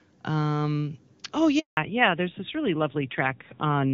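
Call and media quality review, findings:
Handover gap, 1.59 to 1.77 s: speech dies away quickly, then 180 ms of silence while the call switches networks and no speech frames arrive. Audio in that window lost.

Fallback to narrowband from 1.77 s to end: nothing above 4 kHz, duller and rougher speech than the clean HD Voice (AMR-WB) start. Fits a switch to a low-rate AMR-NB mode, around 7.4 kbit/s.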